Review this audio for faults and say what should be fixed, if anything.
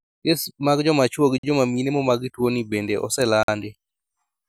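Gaps between chunks at 1.38–1.43 s and 3.43–3.48 s: the speech stops for 50 ms at each join, because the audio was delivered in 2-second chunks and silence was left between them without losing any content. To fix it, schedule each chunk to begin exactly where the previous one ends, trimming any codec padding.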